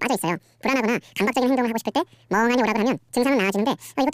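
From the first moment to the end, the speech plays at twice its proper rate and a full octave (12 semitones) high, the signature of audio read two samples at a time (double speed). The reader treated each pair of samples as a single frame, as if the stream were stereo or twice the sample width, so time is compressed by a factor of two.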